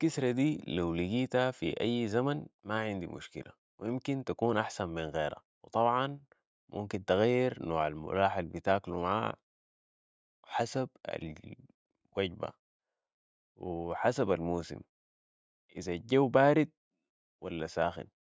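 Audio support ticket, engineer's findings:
No audible technical faults found in the speech signal; no dropouts, distortion or timing irregularities observed that would point to any component in the chain.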